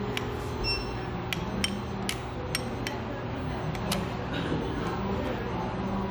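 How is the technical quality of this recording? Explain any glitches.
No glitches or faults are audible.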